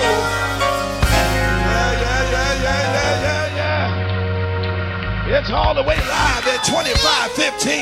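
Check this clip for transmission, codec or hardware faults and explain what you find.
One fault: a digital radio blending to analogue. From 3.29 to 6.28 s the sound turns dull, with hiss roughly 25 dB down and a level shift of about 1 dB. The receiver lost digital reception and cross-faded over 428 ms to the AM broadcast, then back.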